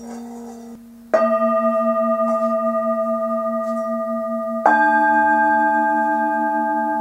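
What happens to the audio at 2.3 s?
Nothing goes wrong at 2.3 s; the audio plays through that moment intact, with no dropout, click or distortion.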